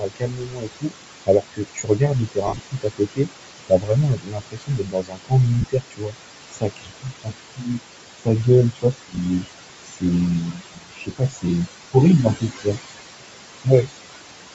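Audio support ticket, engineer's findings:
Noise suppressor artifacts, whole clip. Suppressor pulls room noise down by about 21 dB between phrases, so the background dips and returns under speech. Noise floor sits about 11 dB below speech.

Speech cut by the noise suppressor, at 0.0–3.33, 3.67–6.16, 6.51–7.8, 8.18–9.46, 9.84–10.03, 10.52–11.45 and 11.93–12.67 s. Suppressor misclassifies low-level speech as noise and attenuates it by up to about 22 dB. Soft consonants and word endings sound swallowed or faint.

Lost LE Audio frames, at 2.47–2.60 s (about 98 ms lost across 120 ms, longest gap roughly 50 ms), 5.61–5.68 s (45 ms across 60 ms) and 9.12–9.18 s (about 23 ms). The Bluetooth LE link dropped packets, with gap sizes fitting 7.5 ms LC3 frames. The LC3 decoder concealed the gaps by repeating the last spectrum with randomised signs, so the speech turns into a brief noisy smear.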